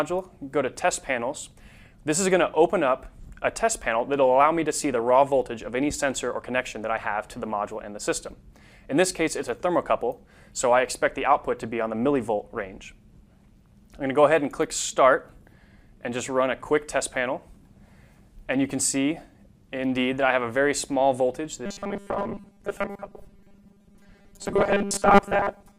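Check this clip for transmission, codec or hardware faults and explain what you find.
One fault is present: robotic sound from repeated short buffers, from 21.66 s to the end at 25.79 s. The sound turns into a rigid, metallic buzz at a fixed 200 Hz pitch. It still follows the shape of the audio roughly. The likely cause is audio arriving too seldom, so playback loops a 5 ms slice to fill the gaps. That loop length sets the 200 Hz buzz. Most of this stretch, around two-thirds or more, is repeated material rather than real audio.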